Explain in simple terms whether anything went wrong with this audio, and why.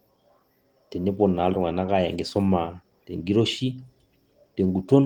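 The speech has a faint, restless unevenness all the way through, as if the timing keeps catching for an instant and moving on. That comes from clock drift between sender and receiver. The sending device's clock runs about 4 percent faster than the receiving one, so audio arrives a little quicker than it can be played. The waiting area that holds incoming sound keeps filling up, and something has to give.

What gives is a string of repeated timing corrections, running from 0.01 s to 4.82 s. To avoid falling behind, the receiver keeps trimming out tiny slivers of sound, which squeezes the speech to about 104 percent of its natural pace. Each trim is very short and the trims come at irregular gaps, so instead of one obvious glitch you hear small hiccups and a tempo that never quite settles.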